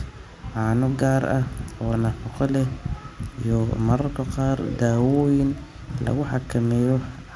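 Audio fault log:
1.9–7.35 s, resampler restarted on every block: a steady tick at 20 Hz, one every 50 ms, runs under the speech from 1.9 s to the end and drops away in pauses. Each block was converted in isolation, so its first and last samples were computed against silence or wrapped data instead of real neighbours. This puts a small step at every block edge. The artefact fits a 48 kHz to 24 kHz downsampling stage.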